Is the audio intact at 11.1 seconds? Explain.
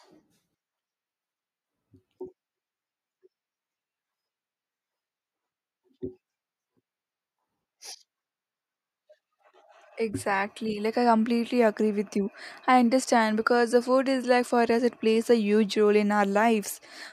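Yes, the audio is intact at 11.1 seconds, with no audible fault at that moment.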